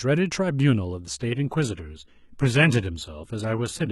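At 1.19 s the speech drops abruptly into an adaptive stream at a lower bitrate and stays there to the end. With no gap, the treble collapses into a synthetic, swirly top end and codec artefacts thicken, which fits a switch from roughly 96 kbit/s AAC to 16 kbit/s HE-AAC.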